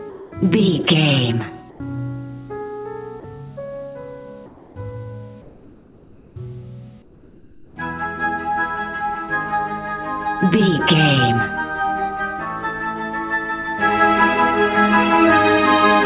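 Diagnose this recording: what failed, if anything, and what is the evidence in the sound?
During pauses at 0.1–0.32 s, 1.7–1.8 s, 4.46–4.76 s, 5.42–6.36 s and 7.02–7.76 s, the real background drops out and a steady, featureless hiss takes its place, about 1 to 6 dB quieter than the surrounding floor, deepening over the clip. This is comfort noise in place of the background, likely from discontinuous transmission in call processing: the sender stops transmitting in silence and the receiver synthesises shaped noise. The band-limit above 4 kHz fits a G.711 A-law 64 kbps path.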